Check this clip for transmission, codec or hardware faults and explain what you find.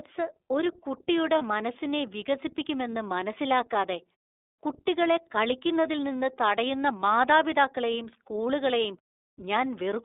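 Two faults are audible: iLBC coding throughout the speech and one short dropout concealed by the decoder.

iLBC codec, throughout: Each 30 ms frame's excitation is coded independently, at a rate that fits the 13.33 kbps mode. The line passes only about 300 Hz to 3.7 kHz, so the top end is missing and the low end is thin. The codec damage is plainly audible. The speech stays clear but has a rough, slightly synthetic texture.

Lost iLBC frames, 1.38 to 1.42 s: A packet went missing, and the gap fits a single lost 30 ms frame. The decoder filled it by repeating the last pitch cycle mixed with noise, which sounds like a brief, held, faintly breathy vowel. Each iLBC frame decodes without depending on the previous one, so the speech snaps back to normal right after the gap.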